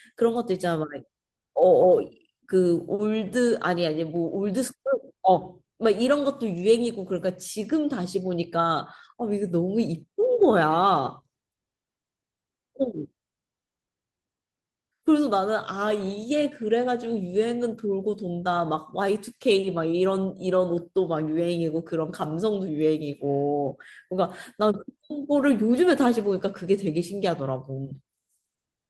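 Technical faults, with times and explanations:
No technical faults can be heard anywhere in this speech recording. Nothing in the audio calls for a time or an explanation.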